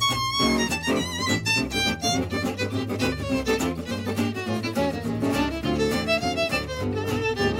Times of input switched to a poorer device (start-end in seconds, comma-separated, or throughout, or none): none